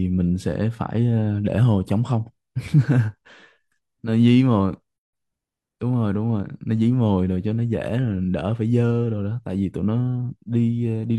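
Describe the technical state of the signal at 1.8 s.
At 1.8 s the signal is intact, with no dropout, distortion, or other audible fault at that point.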